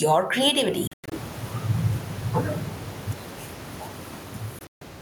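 From the start, a fast limiter is likely reacting to input gain set far too high, producing gain pumping: the level swings around 15 dB beneath faint room noise well below the speech. At 0.87 to 1.12 s, a Bluetooth dropout cuts out about 180 ms of audio in broken holes, the longest about 100 ms. At 4.59 to 4.81 s, another cuts out about 160 ms, mostly in one 140 ms silence. After each hole the speech resumes further along, as if it had played on.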